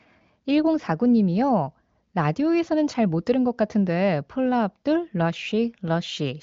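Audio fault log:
The speech carries the coded-core-plus-noise-filled-high-band character of an AMR wideband (HD Voice) path, with content ending near 7.5 kHz and only faint coding texture, which fits one of the codec's top rates around 23 kbit/s.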